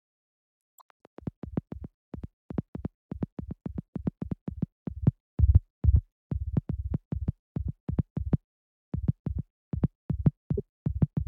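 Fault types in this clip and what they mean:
broken MP3 bit reservoir: likely dropped frames left the following frames, which borrow data from earlier ones, decoding from the wrong bytes; the sound jumps ahead with a short garbled stretch from 0.69 to 0.81 s and again from 10.57 to 10.60 s.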